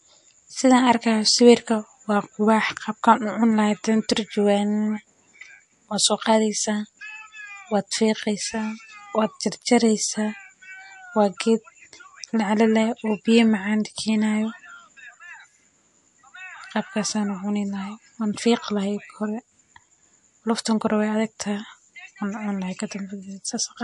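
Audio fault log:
Throughout: MP3 compression. Nothing is present above 11.3 kHz, and the speech has a plainly audible watery, swirling quality, with chirpy sibilants and softened onsets. The likely cause is an encoder short of bits, consistent with a low rate near 48 kbps, cutting the treble and dropping weak spectral detail that flickers between frames. A spectrogram would show a hard ceiling at 11.3 kHz and patchy, blocky holes in the upper bands.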